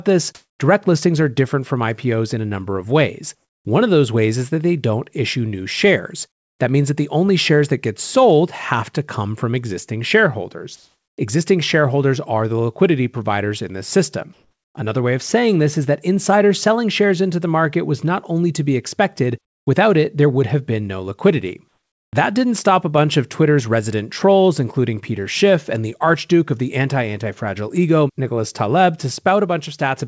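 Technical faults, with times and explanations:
0.35–0.59 s, 10.76–11.18 s, 14.33–14.75 s, 19.46–19.67 s, 21.68–22.13 s: comfort noise in place of the background. In these pauses the quiet room tone, some 63 to 66 dB below the loudest passages, is replaced by steady, featureless hiss, likely generated at the receiver while the sender stopped transmitting. Against the real background it is about 26 dB louder in the first pause, about 2 dB louder or matched at 10.76 and 14.33 s, and about 18 to 19 dB quieter in the last two.
22.10–22.13 s: onset clipped by the voice detector. The sound resumes abruptly, its first 30 ms missing and filled by the preceding hiss, likely because the sender's voice detector reacted late. The onset's soft rise is lost, and like the rest of the call audio it carries nothing above 8 kHz.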